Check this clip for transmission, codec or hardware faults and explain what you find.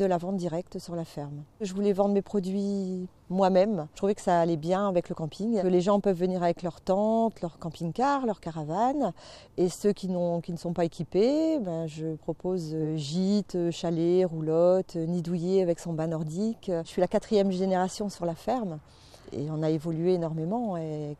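No faults found; nothing audible in the clip points to a problem anywhere in the signal chain.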